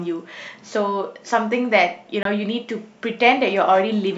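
At 2.23 to 2.25 s the speech drops out in a short hole about 23 ms long. This is a block of digital silence: a stretch of samples replaced by zeros with no fade, which fits a 1024-sample buffer left unfilled in time.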